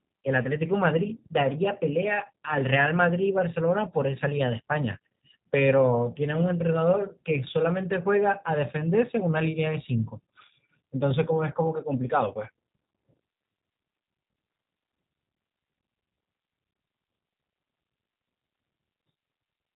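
A speech clip, compressed with the G.729 codec from start to finish. The damage is plainly audible. Nothing above 4 kHz comes through, so the sound is dull and boxy. The speech stays intelligible but has a rough, synthetic edge. The codec does not store the waveform itself. It rebuilds each 10 ms frame from a vocal tract filter, a pitch estimate and a few coded pulses. That sparse rebuild causes the roughness, which fits an 8 kbit/s stream.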